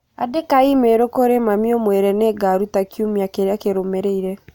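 Nothing in the signal of this speech recording points to a technical fault at any point.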